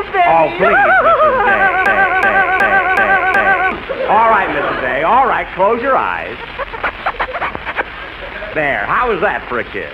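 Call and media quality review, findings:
System hang loop, 1.86 to 3.72 s. A 372 ms segment repeats five times at about 2.7 Hz as a stutter, which fits a 16384-sample ring buffer. About two seconds of audio are lost.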